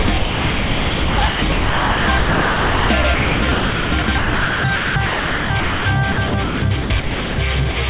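From 0.02 to 5.86 s the sound keeps breaking up: stretch after stretch gives way to a smooth, even hiss, about 4.6 s of it in all. It happens again from 6.12 to 7.38 s, with about 0.76 s replaced. This is sound chopped by the voice detector: the sender's detector likely kept switching transmission off and on, and each gap was filled with generated comfort noise.

At 7.72 to 7.76 s a 40 ms piece of sound drops out and is replaced by the same steady noise before the audio resumes. This is sound dropped by the voice detector, likely a brief moment where the detector treated the sound as background and stopped sending.

Throughout, nothing is heard above 4 kHz, which fits a narrowband 64 kbps call codec.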